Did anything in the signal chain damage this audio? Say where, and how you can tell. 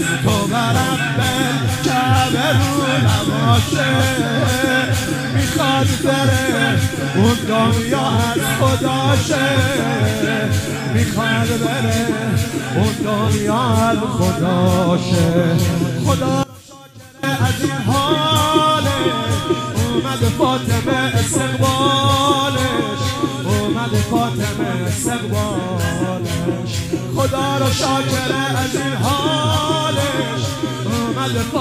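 Yes. From 16.43 to 17.23 s, one channel inverted: in the mono sum the sound drops by about 23 dB to a faint residue, likely from a polarity-reversed connection in the analogue wiring. On the waveform the amplitude collapses for 0.8 s, and the spectrogram shows everything weakened, leaving only a faint residue.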